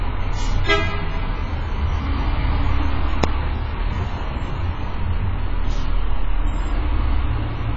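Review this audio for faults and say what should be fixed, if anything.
The sound was likely squeezed through a heavily starved AAC compression stage, consistent with roughly 16 kbps AAC-LC. The encoder discarded everything above 7.6 kHz and quantised what remained coarsely, so the whole clip sounds dull and smeared, with a fizzy, warbling texture. Encoding at a higher bitrate, or keeping a lossless copy for this path, would prevent it.

At 3.24 s, a calculation produced invalid numbers that were written out at full scale for a block lasting about 0.67 ms, which fits a 32-sample block. Because the block is so short, it is heard as a single very loud bang. Checking for non-finite values and replacing them with silence before output would stop this fault from reaching the signal.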